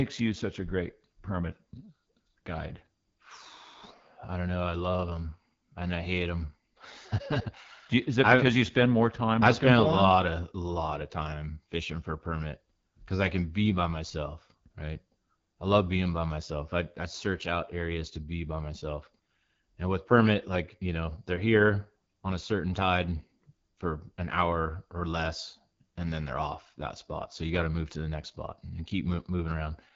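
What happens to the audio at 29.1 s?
The speech passes through the AMR wideband (HD Voice) codec for the whole clip, including 29.1 s, at a low rate that fits 8.85 kbit/s. Its pulse-driven vocal tract model leaves the speech plainly rough and raspy, with nothing above 7.5 kHz.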